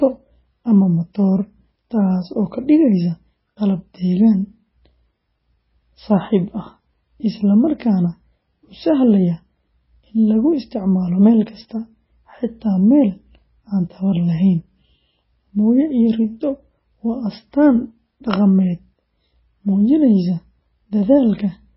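Throughout the speech the sound is watery and swirling, with smeared consonant attacks and nothing above 5.6 kHz. This is likely heavy MP3 compression, where the starved encoder cuts the treble and drops weak frequency lines frame to frame, which fits roughly 16 kbps.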